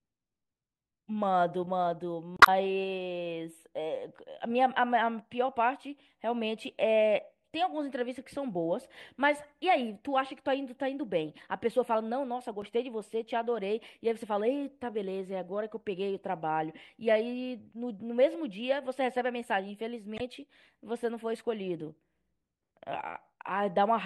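At 2.37 s the speech breaks into a short glitch lasting about 120 ms, the first of three spots of damaged data in the compressed stream. A tiny blip follows at 12.62 s, and a third glitch runs from 20.16 to 20.21 s. Each time, corrupted bytes in the stream throw the decoder off, so it mangles those frames and loses sync until it finds the next good frame header.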